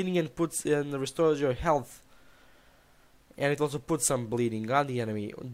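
No technical faults are audible.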